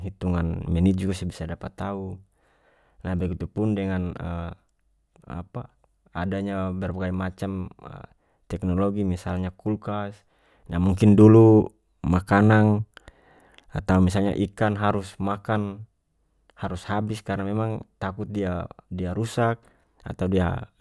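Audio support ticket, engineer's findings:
No faults found in this speech recording. No working path listed beyond the recording itself, so nothing further to report.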